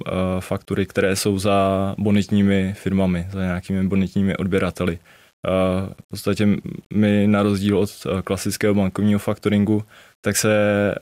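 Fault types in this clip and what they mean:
Low bit depth without dither: throughout the speech, a grainy distortion rides on the sound itself. It roughens quiet passages, and the softest tails break up or drop out instead of fading smoothly. The error sits roughly 40 dB below the signal and changes with it rather than forming a steady hiss. This likely comes from rounding to coarse amplitude steps without dither, which fits about 9-bit resolution.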